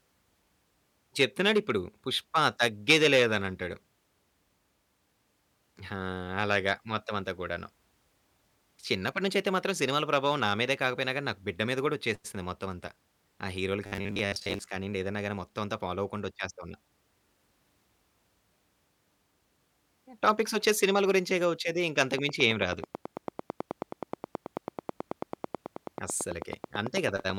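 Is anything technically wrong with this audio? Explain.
Yes, there are two faults.

From 13.86 to 14.72 s there is robotic sound from repeated short buffers. Audio likely arrived too slowly, so roughly half the time a 10 ms chunk was replayed instead. That loop imposes a steady 100 Hz buzz, making the speech sound rigid and metallic.

From 22.18 to 27.31 s there is a train of clicks. A pulse, likely from interference or a faulty connection, recurs regularly at 9.19 per second, around fifty in all. Each click peaks roughly 10 dB above the speech, producing a steady ticking through the final seconds, including in pauses.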